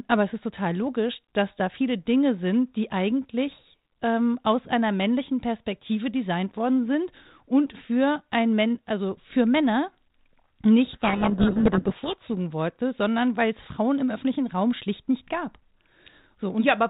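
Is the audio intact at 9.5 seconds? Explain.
Yes, the audio is intact at 9.5 seconds, with nothing there beyond the light coloration of its G.726 ADPCM coding at 32 kbit/s, the standard telephone rate for this codec.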